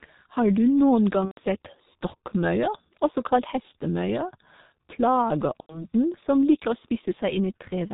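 The speech here has passed through the G.723.1 codec. The low-rate character points to its 6.3 kbit/s mode, which models the voice in 30 ms frames and discards everything above 4 kHz. With damage this heavy, the whole clip sounds muffled and hoarse, the consonants smear together, and the slowly updated voice model leaves the tone rough throughout. On top of that, VoIP packet loss concealed by the speech codec occurs twice. The first gap runs from 1.25 to 1.41 s, right after "du noen gang", and covers about 120 ms of missing audio, consistent with four lost frames. The second runs from 5.61 to 5.86 s, just before "som liker å", and covers about 90 ms, consistent with three lost frames. In each case the decoder kept extending its last pitch and filter while lowering the gain, so the voice stretches into a buzzy tone or coloured noise that fades. Because each frame is built on the previous one, the speech stays weak or distorted for a short while after the packets resume.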